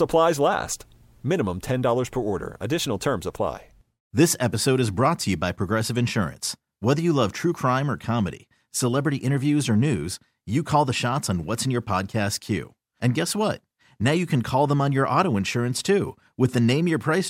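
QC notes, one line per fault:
No faults found in this speech clip. Nothing here needs a QC entry.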